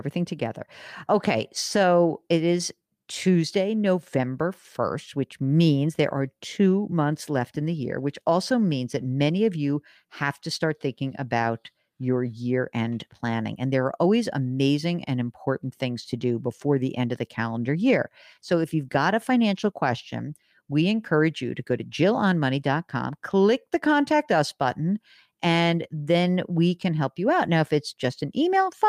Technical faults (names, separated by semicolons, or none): clock drift between sender and receiver; repeated timing corrections